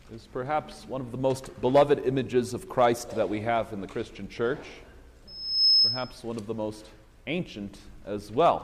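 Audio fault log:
5.27–6.15 s, loudspeaker feedback squeal: a single piercing tone at 5.2 kHz swells out of the sound over roughly 0.4 s and then holds as a shrill squeal standing about 10 dB above everything else, until it cuts off at 6.15 s. A microphone is hearing the loudspeaker it drives, and at 5.2 kHz the round trip returns more than it sends, so that frequency keeps feeding on itself and climbs.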